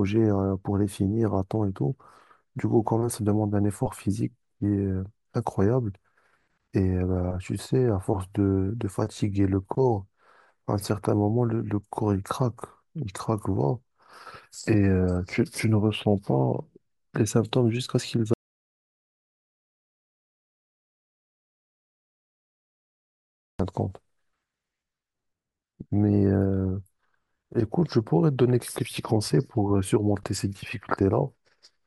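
Speech recording with an audio dropout to silence from 18.34 s to 23.59 s: about 5.3 s of silence, likely from lost input or a stray mute.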